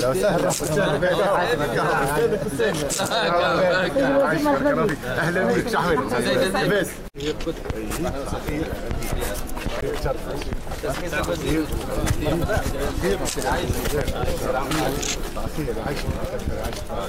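A CD skip occurs at 9.81 s: the laser lost its place on the disc's spiral and landed on a different turn, so the player muted for a fraction of an instant before resuming from the new position. What reaches the ear is a tiny tick, with the audio cutting out for only around 15 ms, followed by playback picking up at a point that no longer lines up with what came just before.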